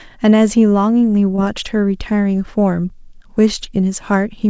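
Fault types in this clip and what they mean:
Short concealed packet loss: About 20 ms of speech arrived too late near 1.36 s. The receiver extended the preceding sound and blended back, leaving a brief smear.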